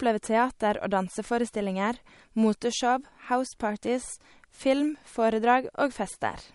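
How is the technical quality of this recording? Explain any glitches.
The recording has two clear technical problems: plainly audible compression damage throughout and a steady train of small clicks.

MP3 compression, throughout: likely a low-bitrate MP3 encode. Nothing is heard above 11.2 kHz, and the speech sounds watery, which fits a low bitrate of about 48 kbps.

Clock slip clicks, 0.19 to 6.44 s: likely two unsynchronised clocks, roughly 150 ppm apart, dropping or repeating single samples, producing about forty faint ticks every fifth of a second.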